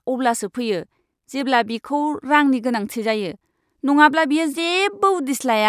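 No technical faults can be heard anywhere in this speech recording.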